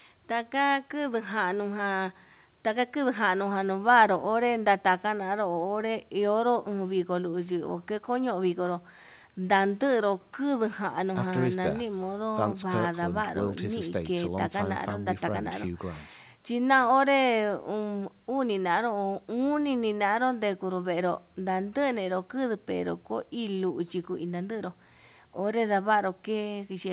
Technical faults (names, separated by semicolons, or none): none